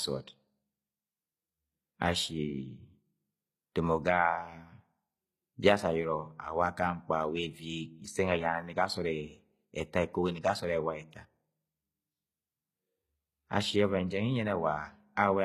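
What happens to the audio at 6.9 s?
At 6.9 s the speech carries the same treble smearing that runs through the whole clip: sibilants sound gritty and metallic, with a lisping edge. The likely cause is HE-AAC compression at a bitrate that sounds near 20 kbps, where the upper band is rebuilt by copying lower bands upward rather than coded directly. On a spectrogram the top shows repeated, blocky copies of lower patterns, misaligned harmonics at the crossover, and nothing above about 20.4 kHz.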